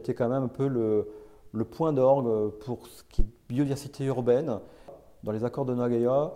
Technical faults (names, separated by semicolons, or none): phantom power thump